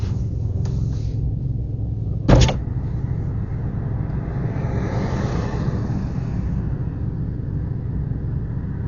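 Throughout, the sounds are dull, with nothing above 6.9 kHz and rough, noisy flutter around tones rather than MP3-style swirl, likely heavy Dolby Digital compression at about 48 kbps.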